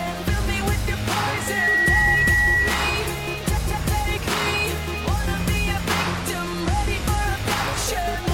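A loudspeaker feedback squeal runs from 1.33 to 3.08 s: a single tone near 1.9 kHz swells over roughly a third of a second to sit around 5 dB above the audio. This happens when a microphone picks up its own loudspeaker until the loop gain tops one. Its steady pitch and self-building growth separate it from a fixed interference whine. From 6.04 to 7.24 s a Bluetooth SBC bit pool drop dulls the treble and adds gritty noise. That fits a congested link forcing the bit pool down from 31 to about 15, roughly 105 kbps, before the rate recovers. Unlike a dropout, the audio keeps playing.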